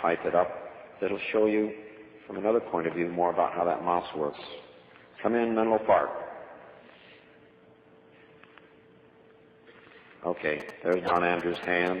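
A nearby 2G phone sending GSM signalling bursts from 10.60 to 11.88 s had its radio pulses rectified by the audio circuit, adding a galloping dit-dit-dit of short buzzes at 217 Hz, roughly 15 dB below the sound.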